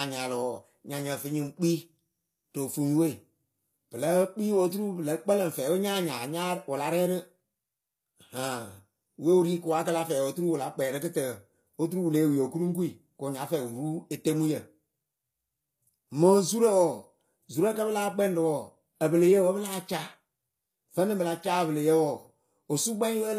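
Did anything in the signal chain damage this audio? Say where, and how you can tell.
Yes, the damage sits at the codec stage and runs through the whole clip. The treble sounds bright yet gritty and metallic, and s sounds come out lispy and synthetic. This is likely HE-AAC compression, where only the lower spectrum is coded and the highs are rebuilt by copying lower bands upward, so harmonics fail to align above the crossover. The plainly audible damage fits a low bitrate around 24 kbps. A spectrogram would show repeated, blocky high-band texture and nothing above 14.9 kHz.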